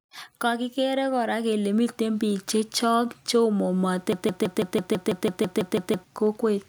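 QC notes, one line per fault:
0.41 to 3.09 s, automatic gain rising: the gain control judged the input too quiet and lifted its gain by about 5 dB, so speech and background swell together.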